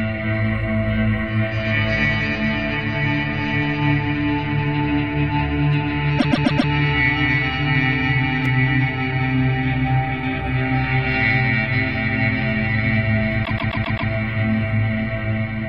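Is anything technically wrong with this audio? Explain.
Yes. At 6.18 to 6.70 s the audio stutters: a fragment of about 130 ms plays four extra times. At 13.44 to 14.10 s the same kind of stutter returns, this time repeating five extra times. These are repeated frames. A short run of compressed data, which fits about five codec frames, was written or sent more than once, so the decoder plays that fraction of a second over again. The repeats stretch the audio by about 0.52 s and 0.65 s.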